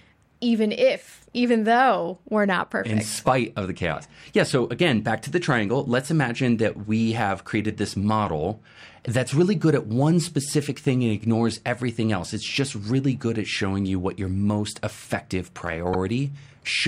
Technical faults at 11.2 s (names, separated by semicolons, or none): none